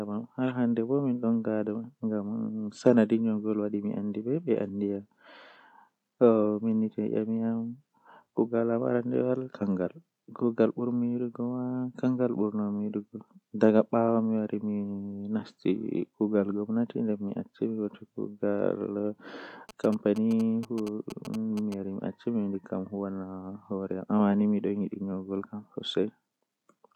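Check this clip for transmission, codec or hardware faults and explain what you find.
One fault is present: interference from a nearby mobile phone.

GSM signalling bursts, 19.69 to 21.74 s. A 2G handset close by is sending brief groups of radio bursts to its network, and the audio circuitry rectifies them. The result is a galloping dit-dit-dit of short 217 Hz buzzes, roughly 15 dB below the speech.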